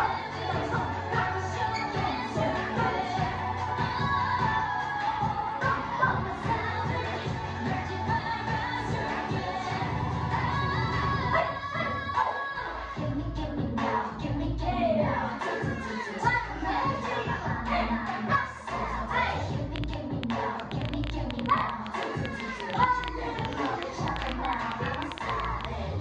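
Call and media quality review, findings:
Train of clicks from 19.76 s to the end, about 9 per second, unevenly spaced, same-shaped pops riding well above the sound, roughly 15 dB hotter. Likely interference pickup or a flaky interface injecting pulses. Ticking carries through the gaps too.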